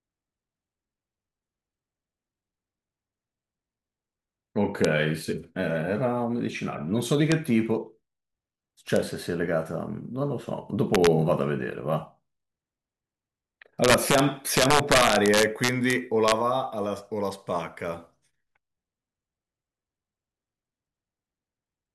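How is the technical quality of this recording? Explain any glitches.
The speech has integer overflow cracks at 4.85, 7.32, 8.96, 10.95–11.07, 13.84–14.19, 14.57–15.93 and 16.28–16.32 s. Loud peaks exceed the integer range, about 2 dB over in the two longer stretches, and wrap to the opposite sign instead of limiting. This gives sharp, violent cracks, harsher than clipping.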